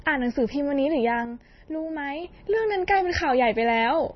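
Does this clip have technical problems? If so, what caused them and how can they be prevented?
Yes. The speech sounds watery and swirly throughout, with nothing above 5.9 kHz, likely MP3 compression at a starved bitrate, around 24 kbps. Unlike a simple low-pass filter, weak frequency lines flicker on and off between frames. Encode at a higher bitrate.

From 1.25 to 2.24 s the level drops abruptly by about 6 dB, likely because one channel drops out before the mono sum. Unlike a fade or gain ride, the change is a sudden step that reverses just as sharply. Check cables, connectors and routing for both channels.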